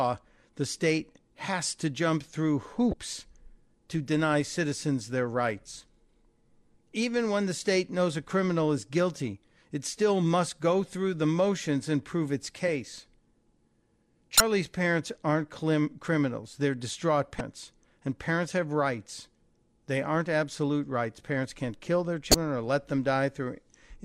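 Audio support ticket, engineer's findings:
Damaged data in the compressed stream, speech track. Short chirp/blip artefacts at 2.90–2.94 s, 14.37–14.40 s, 17.37–17.41 s and 22.31–22.35 s, each about 34 ms. Probable component: compressed file or transport upstream of the decoder. Mechanism: corrupt bytes cause misdecoded or dropped frames, and the decoder loses sync and rescans for the next header, producing the blip.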